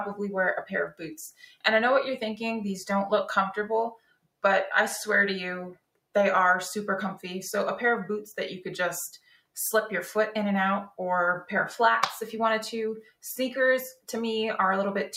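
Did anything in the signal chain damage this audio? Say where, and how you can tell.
Yes. The sound pumps and thins throughout, its level swinging by around 5 dB: a speech noise suppressor in the call processing is reading sustained material as noise.

Sudden dips near 1.31, 3.94, 5.75, 9.17 and 13.03 s, each a few hundred milliseconds and up to about 21 dB deep, are sound cut by the noise suppressor.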